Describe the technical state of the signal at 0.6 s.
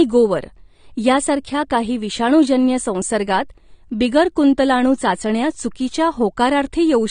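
At 0.6 s the speech is going through lossy encoding, likely AAC compression, which runs through the whole clip. The coder quantises its frequency lines coarsely and drops everything above 9.7 kHz, which fits a bitrate near 32 kbps. Sibilants sound dull and fizzy, with plainly audible warbling smear.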